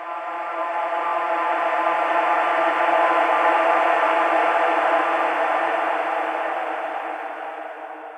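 At 1.07 s the sound stutters briefly, a tiny fragment replaying in quick succession until 1.12 s. These are repeated frames: one 23.2 ms compressed block was decoded twice more than it should have been, which stretches the audio by 46.4 ms.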